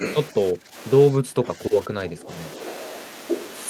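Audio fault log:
0.00–0.04 s, 0.52–0.75 s, 1.10–1.63 s, 1.83–2.30 s: speech suppressed in double talk. The speech dips by roughly 10 to 20 dB, likely because an echo canceller mistook it for far-end echo and attenuated it.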